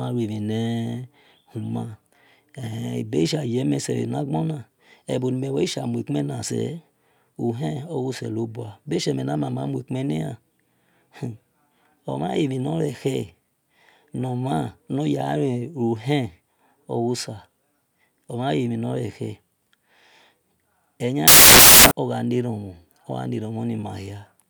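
Speech plays cleanly until 21.28 s. From there to 21.91 s the audio collapses into loud, harsh broadband noise. This is a case of samples built from the wrong bytes. The reader has misassembled each sample, either off by one byte or with the byte order swapped. The fast-changing low bits then land in the high part of each value. That turns the signal into harsh broadband noise.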